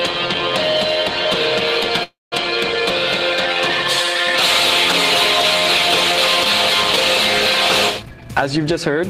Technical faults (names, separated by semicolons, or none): call audio freeze; jitter buffer speed-up